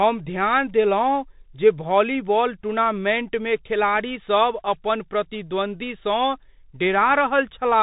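From start to finish, the speech carries the sound of a Bluetooth CVSD headset codec. Nothing passes above about 3.8 kHz, so the top end is gone and the voice sounds boxed in. The damage is plainly audible, which fits a 64 kbps CVSD stream. Each sample is coded as one bit, a step up or down. Fast, loud high sounds outrun that step and distort. S sounds turn scratchy. A granular hiss sits under everything.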